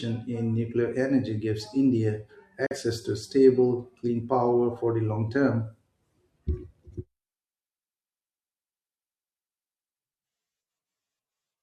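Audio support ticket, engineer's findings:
Digital broadcast dropout, speech, 2.66 to 2.76 s. Symptom: sound fades out over about 3 ms, stays silent, then returns mid-programme. Roughly 43 ms of sent audio is missing, consistent with a single lost frame. Probable component: receiver decoder. Mechanism: signal loss or a failed frame checksum; the receiver mutes until it gets a valid frame, and the missing segment is not recovered.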